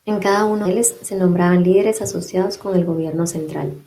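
At 0.65 to 0.67 s a skip ahead occurs: a backlog of waiting speech was discarded, so playback jumps forward with no gap, losing around seven tenths of a second. On a spectrogram, harmonics and formants change abruptly at a hard vertical seam; the waveform shows a discontinuity.

From 0.77 to 1.92 s a jitter buffer speed-up follows, as the receiver trims surplus delay by cutting one or a few pitch periods repeatedly. Speech runs about 8% fast at unchanged pitch, sounding hurried; roughly a tenth of a second vanishes. Spectrograms show compressed syllables, with harmonic spacing unchanged.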